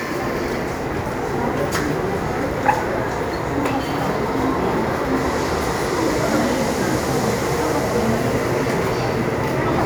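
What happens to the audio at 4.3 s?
Nothing goes wrong at 4.3 s; the audio plays through that moment intact, with no dropout, click, distortion or other fault.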